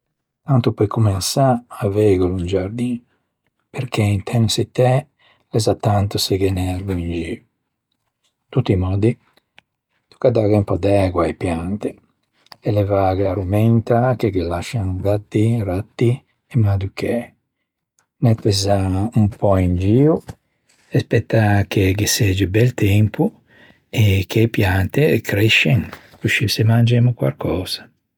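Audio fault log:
No faults detected in this speech recording.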